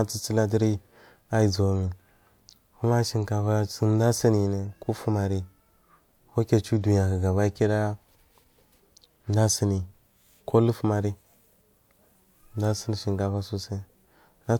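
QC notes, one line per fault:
Nothing stood out on listening through the speech in this clip.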